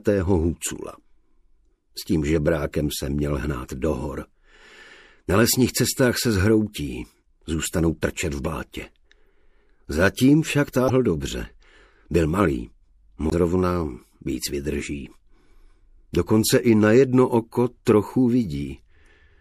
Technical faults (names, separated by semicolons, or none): MP3 compression; damaged data in a compressed stream